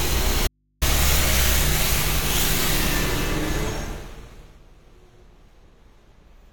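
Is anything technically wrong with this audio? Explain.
Yes. From 0.47 s to 0.82 s the sound cuts out abruptly for about 340 ms: an audio dropout to a faint residue. The gap is not silent. It holds mains hum, roughly 45 dB below the normal signal level, and then the sound returns just as suddenly. The likely cause is a momentary break in the source connection while the downstream input stayed live, so the open input picked up hum instead of the wanted signal.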